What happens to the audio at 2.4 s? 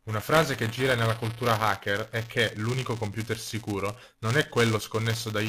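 At 2.4 s the speech carries buffer tearing, which runs through the whole clip rather than starting there. Writer and reader of the ring buffer cross inside each period, so a small slice of every buffer, a few percent, replays audio from roughly 20 ms earlier, hard-joined at both ends. That gives a steady robotic buzz at 200 Hz, a period of 5 ms. Unlike underrun dropouts, it leaves no silent gaps, and it stays locked to the buffer rate whenever signal is present.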